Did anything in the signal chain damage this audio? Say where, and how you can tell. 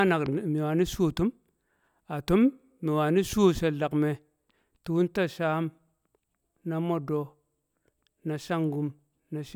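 No, nothing in the signal chain has audibly damaged this speech recording. I can't place a fault at any stage, from the analogue side through conversion, processing, transmission or playback.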